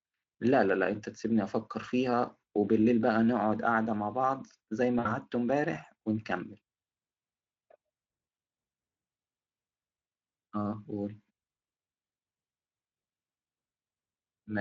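At about 4.99 s the speech hits VoIP packet loss concealed by the speech codec. Roughly 60 ms of audio went missing, and the decoder filled the gap by repeating its last pitch and filter shape at falling gain. The sound smears into a buzzy tone or coloured noise that fades, the loss runs until about 5.17 s, and the voice stays weak a little past it. On a spectrogram, flat horizontal harmonic lines replace the normal speech movement. The waveform shows a short stretch of repeating cycles that shrink in amplitude, all sitting on the light coloration of the Speex coding.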